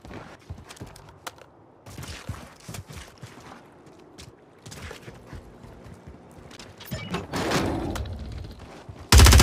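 Twice the output stream had a run of samples replaced by zeros, a block of digital silence: about 12.8 ms at 6.57 s and 5 ms at 8.48 s. The sound cuts out and back with no fade in or out, and both gaps are short enough to be heard as brief ticks or dips rather than silence.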